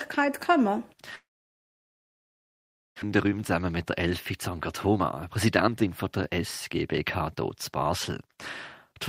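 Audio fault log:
1.15 to 3.04 s, long network dropout. The speech stops and the gap is bridged for about 1.9 s. The last sound carries on briefly as a fading buzz, then about 1.7 s of near silence follows. About 1.0 s of the original speech never returns. When sound resumes it has skipped ahead. A stall in packet arrival is the likely cause, with the receiver concealing the hole until new audio reached it.
3.11 to 4.07 s, 4.55 to 5.00 s and 5.46 to 8.39 s, jitter buffer speed-up. After the dropout, late audio piles up in the buffer. The receiver trims small pitch-period slices again and again to shed the extra delay. Pitch stays put but the pace rises. It runs about 8% fast, then 10%, then 12%. The last stretch sheds roughly 0.4 s and sounds clearly hurried. Altogether about half a second is cut.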